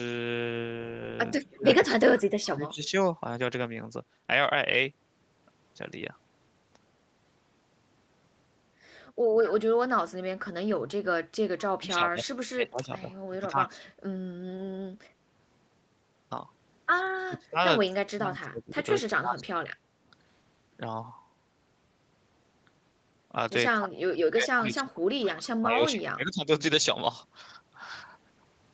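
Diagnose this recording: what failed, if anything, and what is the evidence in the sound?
Call processing, likely a far-end echo canceller that failed to remove all of its loudspeaker pickup: at 1.41 to 1.47 s a faint, delayed copy of the speech returns, lagging by 197 ms and sitting about 30 dB below it. This is a brief echo leak.

The same echo-control stage, likely mistaking near-end talk for echo when both sides spoke, clamped it. Speech suppressed in double talk appears at 1.49–2.94, 11.77–13.9, 17.28–17.58, 17.89–19.88, 23.73–23.98 and 24.3–26.48 s, where the speech dips or drops out in pieces by roughly 25 to 35 dB.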